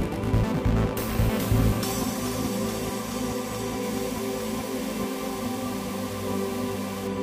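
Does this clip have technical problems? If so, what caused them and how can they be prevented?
Yes. From 3.83 to 7.07 s the sound turns grainy with low bit depth without dither. Grain that follows the signal this closely fits rounding to about 5 bits. The waveform shows coarse stair-steps, and the spectrogram shows a signal-tracking noise haze only around 15 dB below the sound. Keeping at least 16 bits, or adding dither before any bit-depth reduction, prevents it.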